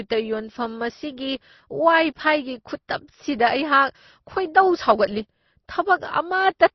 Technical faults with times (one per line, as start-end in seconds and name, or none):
0.00-6.75 transcoding between lossy codecs